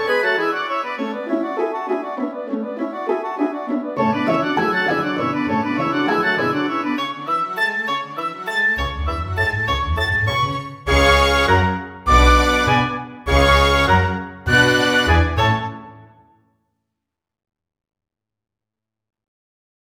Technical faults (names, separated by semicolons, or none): none